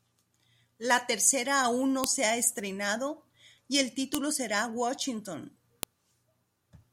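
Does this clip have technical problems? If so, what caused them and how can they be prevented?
Yes. Separate WAV pieces were joined with their headers left in, so the header bytes play as samples: a file header played as audio. Each causes a sharp, loud click, at 2.04 s (between "tercera aún no" and "se ha estrenado y"), 4.15 s (after "ha estrenado y el") and 5.83 s. Stripping the headers from every piece before joining or streaming prevents this.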